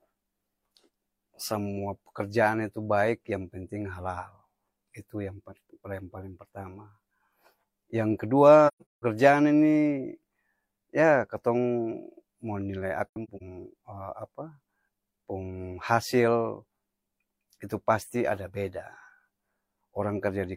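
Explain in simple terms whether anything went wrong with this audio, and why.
Twice, chunks of the compressed audio stream went missing, a problem called AAC frame loss with muting. The decoder filled each gap with silence, fading the speech out and back in rather than cutting it abruptly. From 8.67 to 9.02 s, about 0.3 s of speech drops out in patches, the longest lasting around a seventh of a second. From 13.09 to 13.42 s, about 0.17 s disappears, with the longest patch roughly a tenth of a second. These sound like soft holes in the speech.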